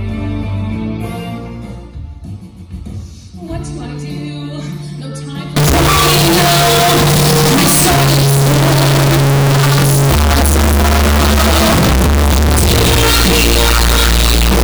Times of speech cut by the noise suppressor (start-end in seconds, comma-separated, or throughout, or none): none